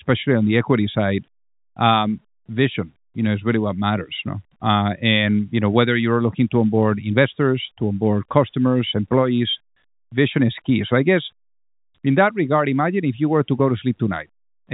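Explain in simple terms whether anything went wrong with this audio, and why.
Nothing went wrong; this telephone-quality speech has no faults.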